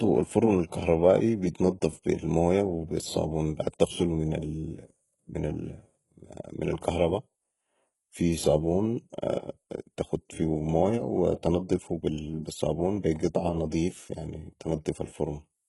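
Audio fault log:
Throughout: HE-AAC compression, likely the cause of the heavy coding damage across the speech. Only the lower band appears to be coded directly; the treble above it is rebuilt by spectral band replication, copying lower bands upward under a coarse envelope, so harmonics fail to line up across the crossover and s sounds come out gritty, metallic or lispy. Nothing is present above 11.5 kHz, and the extent of the damage fits a very low bitrate of around 12 kbps.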